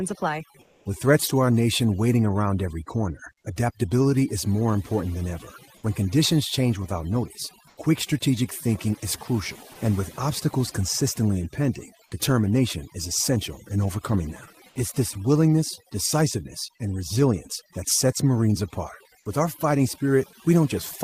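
Overdone noise removal runs through the whole recording. The suppressor pushes individual frequency bands down hard wherever they sit close to its noise estimate, so the pauses fall to near silence dotted with twinkling specks, and the quieter parts of the speech are stripped along with the noise. Unlike a steady fill, this residue flickers and changes from moment to moment.

From 0.61 to 0.85 s, and again from 7.69 to 7.77 s, comfort noise takes the place of the background for 240 ms and then 80 ms. The pattern points to Opus discontinuous transmission: the sender likely stopped sending during the pause, and the receiver generated noise shaped to match. The background, which sits about 38 dB below the loud parts, becomes a flat, featureless hiss, about 1 dB quieter in the first gap and about the same level in the second. What sets it apart from the suppressor's artefacts is that this hiss is steady and uniform instead of speckled.

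At 9.73 to 9.75 s, sound dropped by the voice detector cuts about 10 ms of actual speech, and roughly 20 ms is replaced by generated noise. The detector likely mistook part of the sound for background. Unlike the comfort-noise gaps, which replace only the background, this one removes part of the speech itself, so the sound briefly gives way to steady noise.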